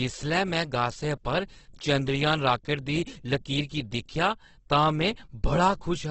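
Opus compression affects the whole clip: the speech turns rough and grainy, with nothing above 8.2 kHz. The likely cause is the codec's music mode running short of bits and filling bands with folded spectrum or noise, which fits a rate near 12 kbps.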